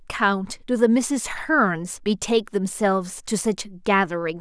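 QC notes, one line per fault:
No faults found in this speech clip. There is nothing here to log.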